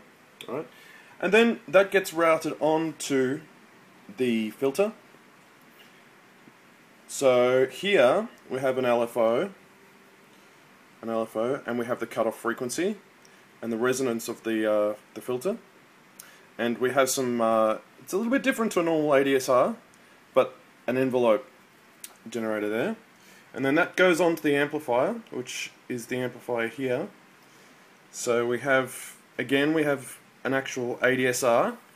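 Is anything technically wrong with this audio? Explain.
No, nothing technically wrong can be heard anywhere in this audio, and the signal stays intact throughout.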